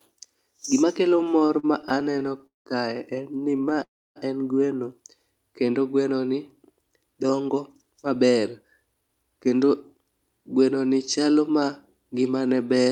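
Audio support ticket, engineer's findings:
Repeated stalls (stutter), 1.09–2.68 s, just before "kae en": 23 short gaps stretched with repeats of the last sound, about 0.46 s total, longest 192 ms, roughly 29% of the span. Jitter buffer kept running dry on late packets. Again at 3.44–3.79 s, between "kae en" and "en gweno": 7 tiny gaps, 76 ms total, none over 21 ms.

Call audio freeze, 3.83–4.18 s, right before "en gweno": last sound held then fading, 280 ms of it dead silent, 324 ms inserted. Likely packets stuck in transit and the buffer emptied. Resumes where it left off, so latency grows by 324 ms.

Jitter buffer speed-up, 6.33–10.19 s: sound runs about 10% fast at the same pitch and feels rushed. Receiver trimming pitch-period slices to drain a backlog, roughly 0.4 s cut overall.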